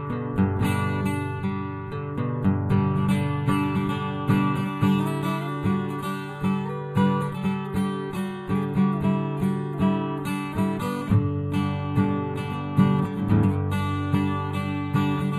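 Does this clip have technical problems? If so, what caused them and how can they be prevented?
Yes. Channel delay (comb filtering) runs through the whole clip. One channel arrives roughly a tenth of a millisecond late, a lag of around four samples, and when the two are summed to mono the shared content cancels near 5 kHz and again near 15 kHz. The sound is hollow or phasey in the upper range. A spectrogram would show fixed dark horizontal bands at those frequencies. Aligning the channels before any mono fold-down prevents it.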